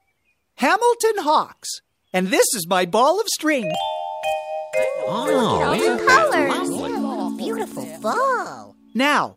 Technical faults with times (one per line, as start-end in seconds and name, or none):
3.74 overlap between stream segments
7.72-7.74 overlap between stream segments